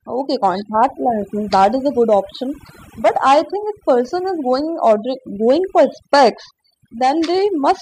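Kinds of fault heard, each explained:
Overdone noise removal: the denoiser's cranked too hard, so bands near the noise floor get gutted. The background drops and breaks up into twinkly specks.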